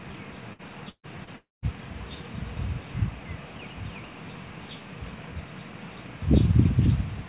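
At 0.53 to 0.62 s comes a burst of packet loss. About 60 ms of audio never arrived, and the receiver stretched the last sound across the hole before jumping ahead. It sounds like a short smeared hold, then a skip. On a spectrogram the band below the call path's 4 kHz ceiling turns into a frozen, repeating pattern. The waveform shows the last sound decaying before the real signal resumes.

A second burst runs from 0.89 to 1.06 s and is longer, with about 150 ms missing. The concealment holds and fades the last sound, and the final 70 ms or so falls to silence before the audio returns. The spectrogram shows a smeared, flattened stretch fading into a blank column. The waveform tapers to a flat line and then restarts abruptly.

At 1.24 to 1.30 s there is a short concealed packet loss. Roughly 30 ms went missing and about 25 ms of it was filled by continuing the preceding sound, then blended back. 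It passes as a brief smear or wobble rather than a gap. On a spectrogram it is a thin, slightly blurred vertical strip. The waveform shows a small discontinuity in envelope with no flat section.

From 1.36 to 1.65 s the audio drops out for about 270 ms, most likely a long network dropout. A fading buzz or hiss continuing the last sound covers the start, then roughly 190 ms of silence follows before the sound resumes further along, with that stretch lost. The spectrogram shows a decaying smear giving way to an empty block below 4 kHz. The waveform decays to a flat line, then the signal snaps back in.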